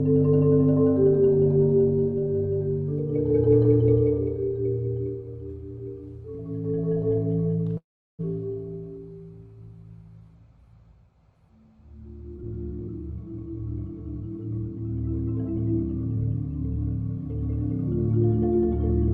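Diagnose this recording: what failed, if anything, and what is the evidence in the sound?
Call audio freeze, 7.77 to 8.21 s, at the network and jitter buffer stage. The sound halts for 415 ms, 370 ms of it silent, then resumes exactly where it stopped with nothing missing. The likely cause is late packets draining the jitter buffer.

Jitter buffer speed-up, 12.34 to 14.76 s, in the receiver's call processing. The audio plays at 115% speed with unchanged pitch and sounds hurried. The buffer cuts short pitch-period slices, about 0.4 s in total, to shed excess buffered delay.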